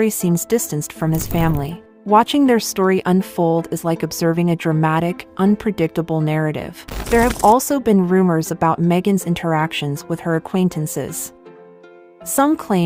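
No technical fault can be heard anywhere in the recording. There is nothing to place on a timeline or trace back to a cause.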